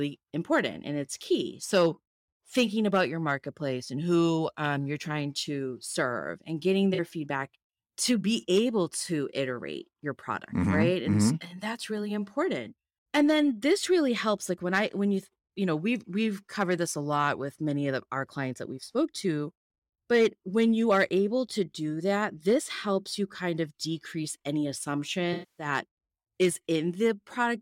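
Speech clip with AAC frame loss with concealment. Lost frames were patched from the last good spectrum, leaving a brief smeared patch between "to serve and getting" and "feedback to be able" at 6.94–7.00 s (about 43 ms, which fits two frames), and a 256 ms gap at 25.33–25.66 s that decays toward a near-silent noise floor before fading back in.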